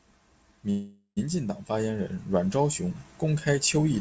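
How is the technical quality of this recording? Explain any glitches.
The recording has one glitch, a call audio freeze, heard over a call-grade channel with nothing above 8 kHz, as expected from a wideband codec such as G.722.

Call audio freeze, 0.70 to 1.19 s, just before "进党发言": the speech stops and the last sound is held as a fading buzz that decays to about 100 ms of silence. The likely cause is late packets draining the jitter buffer. Speech resumes where it left off, with nothing lost, but everything after runs roughly half a second late.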